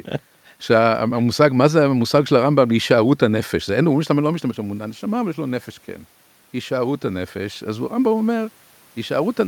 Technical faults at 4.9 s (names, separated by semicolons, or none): none